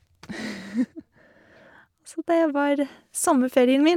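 No technical faults can be heard in the recording; the signal stays continuous throughout.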